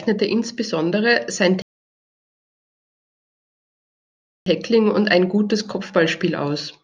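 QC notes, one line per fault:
1.62–4.46 s, rebuffering stall: the player used up its downloaded audio and halted playback until more data arrived, adding about 2.84 s of dead air. The speech cuts to silence right after "insbesondere sein" and picks up again at "und ein gutes" exactly where it left off. Nothing is skipped or repeated, so the sentence stays whole, but the long gap breaks its flow and sounds like an abrupt freeze rather than a natural pause.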